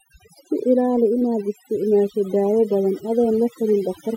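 Speech, affected from start to finish by overdone noise removal. The noise reducer is set far too aggressively, pulling individual frequency bands down to near nothing whenever their level sits close to its noise estimate. The background drops and breaks up into twinkling, isolated specks. The low-level parts of the voice fall under the same threshold and are stripped away.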